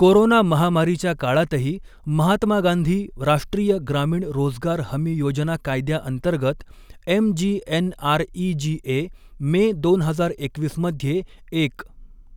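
A single sharp click cuts through the speech at 1.35 s, showing as a thin vertical line across the spectrum. It is likely dropped samples: a fraction of a millisecond missing from the stream, so the waveform jumps abruptly to a later value without losing any audible sound.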